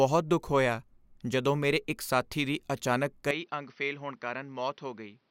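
At 3.31 s, right after "ਇੱਕ ਸਾਥੀ ਦੀ ਅਚਾਨਕ", the speech abruptly turns duller and boxier, with nothing above 6 kHz, a drop of about 10 dB, and a faint new noise floor, with no gap. This is likely an input switched to a poorer device, which persists to the end.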